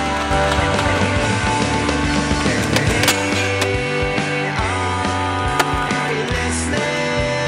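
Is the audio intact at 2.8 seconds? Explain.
No, 2.8 seconds falls inside a doubled audio track running from about 0.31 to 3.07 s. A second full-band copy of the sound trails the original by roughly 0.3 s, at about the same loudness, with no decay or room colour. It's likely a second capture through a slower path getting mixed back in. The copy then cuts out abruptly at 3.07 s.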